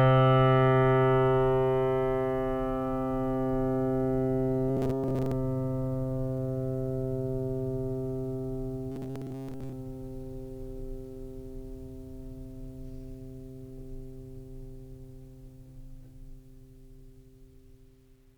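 Music, with two bursts of robotic sound from repeated short buffers, at 4.69 to 5.32 s and 8.92 to 9.73 s. Each burst is a rigid metallic buzz at 134 Hz. The likely cause is late audio, patched by looping a 7.5 ms fragment over most of each gap.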